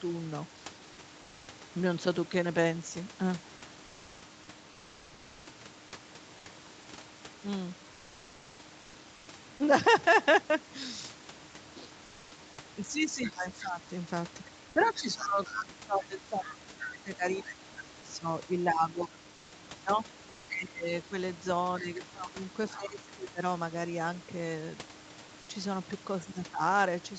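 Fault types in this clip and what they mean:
Comfort noise in place of the background: At 1.21–1.47 s, 8.81–8.93 s, 9.15–9.27 s and 19.35–19.51 s, short pauses lose the real room background, which sits about 25 dB below the loudest speech. A flat, featureless hiss about 1 to 2 dB quieter takes its place. The sender likely stopped transmitting during these gaps under Opus discontinuous transmission, leaving the receiver to synthesise stand-in noise until speech resumed.
Speech suppressed in double talk: From 12.84 to 23.42 s the talker's voice repeatedly sinks, thins and breaks apart for roughly seven seconds in total, dropping by around 25 dB at its deepest. A shorter dip of roughly 15 dB follows at 26.18–26.61 s. Both sides were likely speaking at once, and the echo canceller, unable to tell the local voice from loudspeaker echo, turned everything down together.
Other side's voice leaking through: A brief scrap of a second voice appears at 13.24–13.36 s, then a longer stretch from 14.85 to 19.18 s, roughly 15 dB below the main speech. 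This overlaps the suppressed double-talk section. The far end was likely playing from the talker's loudspeaker into the microphone, and the echo canceller removed only part of it, so a residue of that other voice got through.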